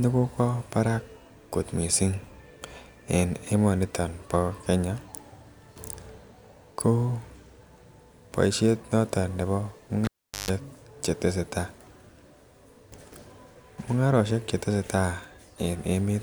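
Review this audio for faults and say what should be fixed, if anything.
Cable pulled and plugged in, 10.05–10.51 s: pop, 0.41 s dropout including 0.15 s of 50 Hz buzz from tip-only contact, then the return pop. Mute the channel before re-patching and use locking connectors.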